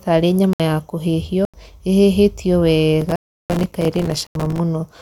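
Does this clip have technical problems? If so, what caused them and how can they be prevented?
Yes. Blocks of digital silence at 0.53–0.60 s, 1.45–1.54 s, 3.16–3.50 s and 4.27–4.35 s: likely unfilled output buffers, dropping to a flat, silent waveform. Lengths are 65, 85 and 341 ms; the 85 and 341 ms gaps are 4096 and 16384 samples. Prevent this with larger buffers and real-time thread priority for audio.

Processor overload crackle from 3.01 to 4.58 s: around a hundred missed deadlines, each leaving a silent hole of about 3 ms, shown as dense broadband speckle and waveform dropouts. Prevent this by reducing CPU load or raising the buffer size.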